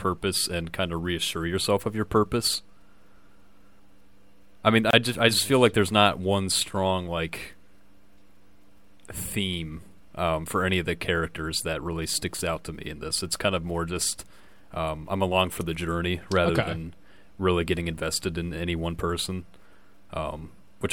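At 4.91 s, right after "I mean", the speech drops out for about 26 ms, then resumes at "just I just feel". This is a gap at a join of encoded pieces. Encoder delay and end padding were left in. The silence has edges smeared by the codec.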